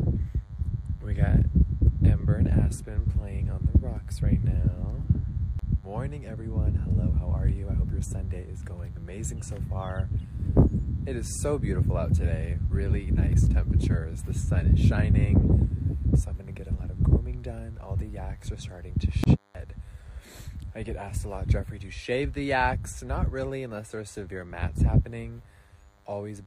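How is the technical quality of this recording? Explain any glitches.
A single fault runs through the whole recording: DECT cordless phone buzz. A nearby DECT handset or base transmits a brief radio burst every 10 ms, and the audio circuitry rectifies it into the signal. The result is a steady, thin 100 Hz buzz with many harmonics, sitting around 40 dB below the sound.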